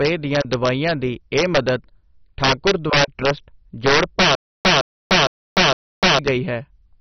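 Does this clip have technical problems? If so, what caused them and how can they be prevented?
Yes. Integer overflow runs throughout: speech peaks driven about 7 dB past full scale wrap to the opposite sign instead of clipping, so around one percent of samples flip across the whole range and produce sharp cracks on loud syllables. Prevent it by using saturating arithmetic or adding headroom before the gain stage.

Throughout, the sound is dull and gurgling, with nothing above 6.1 kHz and coarse, flickering upper bands. This is likely MP2 compression starved of bits, which fits a very low rate around 32 kbps, so the encoder shuts off high sub-bands. Encoding at a higher bitrate or with a more efficient codec prevents it.

From 4.35 to 6.19 s there is a stutter with silent gaps: a 162 ms burst repeats four times, each followed by about 298 ms of digital silence, a cycle of roughly 459 ms, and the audio that should fill that span is missing. 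The likely cause is a stalled stream or player replaying its last buffer on each retry. A larger buffer and a steadier delivery path prevent it.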